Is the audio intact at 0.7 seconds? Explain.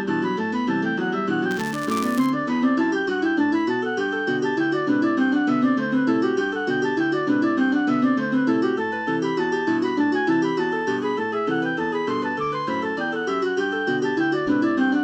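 Yes, the audio is intact at 0.7 seconds, with no dropout, click, distortion or other technical fault at that moment.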